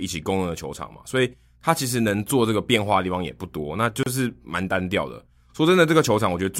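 At 4.03 to 4.06 s the speech drops into a gap of about 32 ms at a join of encoded pieces. Separately encoded segments were butted together untrimmed, leaving encoder start delay and final-frame padding in place; the silence has smeared edges before the speech resumes unchanged.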